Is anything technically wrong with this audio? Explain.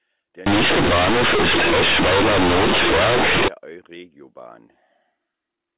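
Yes. From 0.46 to 3.48 s, A-law companded audio is read as linear 8-bit samples without expansion, so quiet speech swings over about half the range, giving loud, buzzy distortion and heavy noise in pauses. Outside that stretch, the sound is capped at 4 kHz, consistent with G.711 telephone coding.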